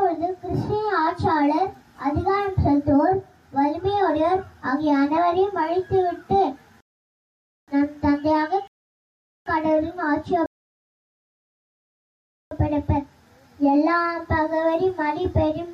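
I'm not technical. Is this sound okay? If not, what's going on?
No. Playback stops three times in a rebuffering stall: from 6.81 to 7.68 s, 8.68 to 9.46 s, and 10.46 to 12.51 s. The player ran out of downloaded audio, went silent while waiting, then carried on from the same spot. Nothing is skipped, but about 3.7 s of silence is added.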